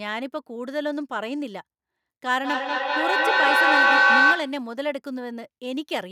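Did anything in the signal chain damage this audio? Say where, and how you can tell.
Yes. A feedback howl forms in the call path between 2.44 and 4.65 s. Sound from a loudspeaker re-enters a microphone and gains level each pass. It narrows to a tone near 1.5 kHz, with the loop coming round about every fifth of a second. It peaks about 10 dB above the speech.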